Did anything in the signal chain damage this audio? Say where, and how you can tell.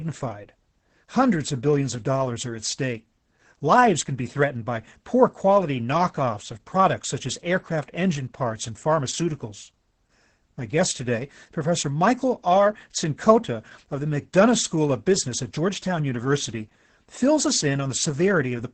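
Yes, at the codec stage: Opus voice compression runs through the whole speech clip. On a spectrogram there is a hard ceiling near 8.6 kHz, and the harmonics look smeared. The voice sounds muffled, hoarse and slightly robotic, which points to SILK wideband coding at roughly 10 kbps.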